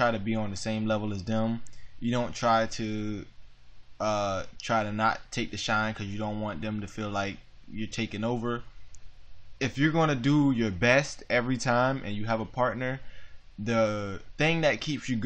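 Nothing technically wrong turns up anywhere in this audio, so there's no fault to point to and no cause to chase.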